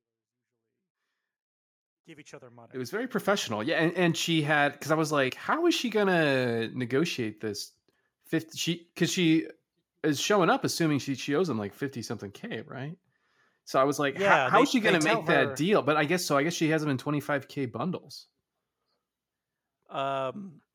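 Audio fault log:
No fault can be heard in this speech. The level rises gradually from the very beginning in a smooth fade-in that reaches full level at about 3.27 s, with no click or hard edge at the opening.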